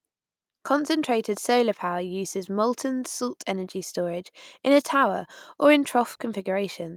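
Nothing in the recording stood out as a technical problem on listening.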